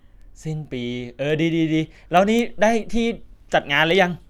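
From 0.22 s to 4.13 s, the speech carries word clock ticks. They arrive at a steady rate, about every fifth of a second, roughly twenty in all. The cause is a digital link read by a device on its own clock, not locked to the sender. The two clocks differ by around 100 parts per million. Each time they slip past each other, a single sample is dropped or repeated, and that leaves a brief tick.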